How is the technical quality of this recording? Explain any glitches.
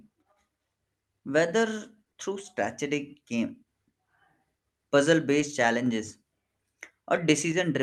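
The speech carries three brief short concealed packet loss glitches, heard over audio whose top end stops near 12 kHz, which fits a call codec path such as Opus.

They fall at 2.13 s, just before "through strategic game", at 5.39 s and at 6.75 s. Each time, about 10 ms of audio failed to reach the decoder in time, and the receiver filled the gap by extending the preceding sound, pitched or noise-like, then blending back. Each gap lasts roughly 20 ms and comes across as a tiny smear or wobble.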